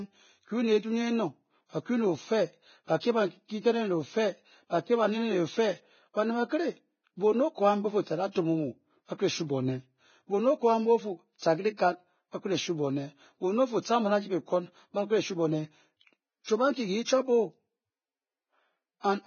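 Heavy compression damage runs throughout this speech clip: nothing is present above 6.6 kHz, and the remaining treble is hissy and grainy, with roughened tones and smeared consonant attacks. This is likely Vorbis coding at a low bitrate, probably around 16 kbps, where coarse treble quantisation turns fine detail into noise.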